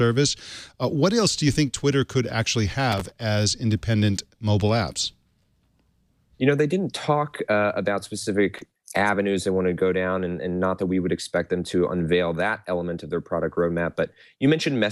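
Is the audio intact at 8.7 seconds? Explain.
No. Between 8.53 and 8.86 s the processor is overloaded and keeps missing its deadlines for very short audio buffers, each around a millisecond and a half. Roughly twenty buffers go unfinished, and each gap is filled with a replay of stale audio whose edges do not join the signal around it. This is processor overload crackle: the abrupt splices stack into a gritty, tearing burst over the sound that stops once the load eases.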